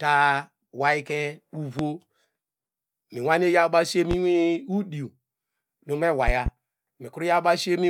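Loud pops occur at 1.79–1.83 s, 4.11–4.15 s and 6.28–6.50 s, the first standing roughly 15 dB above the speech and the others about 10 dB, with the last a pair in quick succession. Each is a sharp thump laid over the speech, which continues underneath, consistent with a sudden voltage step or pulse, likely from a connector, switch, static discharge or driver glitch, shaped by the downstream circuitry.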